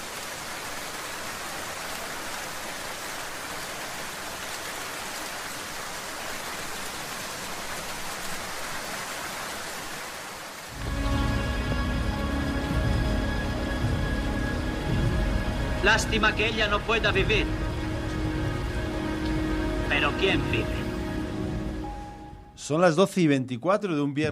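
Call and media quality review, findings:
No audible faults found across the recording.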